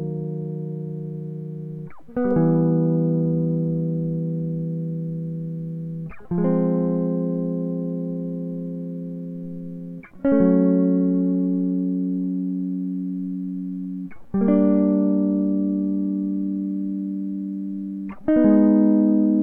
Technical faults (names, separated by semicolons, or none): none